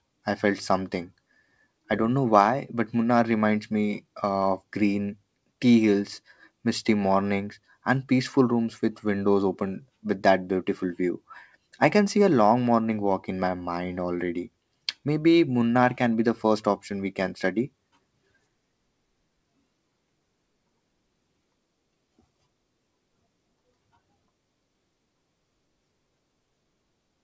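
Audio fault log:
Nothing stood out on listening to this speech clip.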